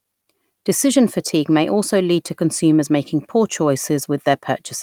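Nothing stood out as a technical problem on listening to this short speech recording.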